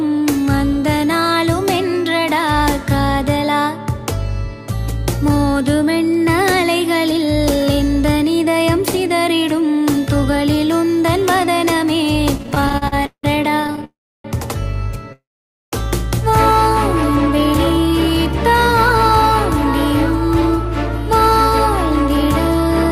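The audio starts stuttering around 12.37 s and keeps at it until 13.84 s. That's repeated stalls (stutter): packets were showing up late or slower than playback, so the jitter buffer kept running dry. You get 19 little hitches in that stretch, the longest about 171 ms, with the receiver stretching the last bit of sound to bridge each one. All told about 450 ms gets padded in, close to a third of that span, though nothing is actually lost, so it just drags. Right after, from 13.84 to 14.26 s, the sound hangs, fades and drops to silence for about 0.31 s before carrying on from where it stopped. The same thing happens again from 15.12 to 15.74 s, with about half a second of silence. These are call audio freezes, likely packets held up in transit long enough to empty the buffer, which pushes everything after them back by roughly 0.4 s and then 0.6 s without losing any content.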